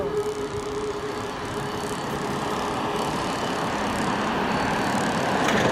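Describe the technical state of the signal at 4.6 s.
At 4.6 s the signal is intact, with no audible fault at that moment.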